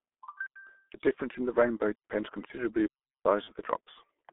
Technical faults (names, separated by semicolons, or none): G.723.1 codec; block of digital silence; VoIP packet loss concealed by the speech codec